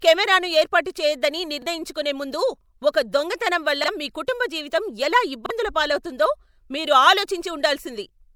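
A repeated buffer at 1.62 to 1.66 s is the first fault: the playback device ran out of fresh audio and played its last block once more, so a slice of about 43 ms sounds twice, joined hard at the seam. That length fits a 2048-sample buffer. It comes across as a brief stutter, and around 40 ms of the real sound is skipped.

Pre-echo follows at 1.94 s and again at 2.92 s. Here a transform codec spread its quantisation noise across a whole block, and because a sharp attack sat late in that block, the noise meant for the loud onset leaked into the quiet just before it. The result is a short hiss of about 13 ms and 18 ms respectively ahead of each attack, which blunts and smears it.

The same stutter from a replayed 43 ms buffer returns at 3.84 to 3.88 s, right after "దొంగతనం వల్ల". Pre-echo then smears the attack at 4.27 s, just after "దొంగతనం వల్ల మీ", with a 13 ms hiss, and again at 4.70 s with 18 ms.

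A third repeated buffer doubles the audio at 5.46 to 5.50 s. The last pre-echo, about 11 ms of hiss, lands at 7.27 s, following "పాలవుతుందో మీరు".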